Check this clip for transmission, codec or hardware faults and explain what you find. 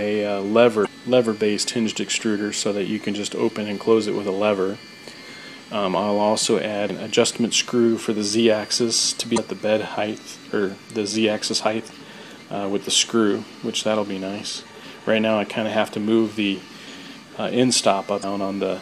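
Damaged data in a compressed stream occurs four times: 0.82–0.87 s, 6.89 s, 9.34–9.38 s and 18.20–18.24 s. Corrupted bytes make the decoder misread frames and lose sync until it finds the next frame header. Each event is a brief chirp or blip, lasting about 40 ms or less.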